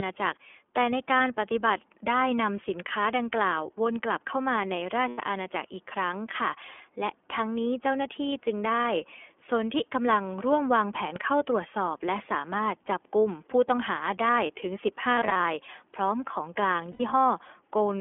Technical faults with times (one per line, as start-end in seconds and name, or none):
0.00-18.01 iLBC codec
5.08-5.19 lost iLBC frames
15.16-15.40 lost iLBC frames
16.91-17.01 lost iLBC frames